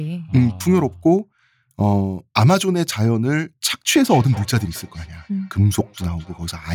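A speech clip with feedback echo between two devices: from 3.7 s to the end, two devices in the same room share the call, and one replays what the other's microphone sent, which that microphone then captures again. Neither echo canceller removes sound played by the other device. Each stretch of speech returns roughly a fifth of a second later as a thinner, ringing copy, peaking at about 21 dB below the speech.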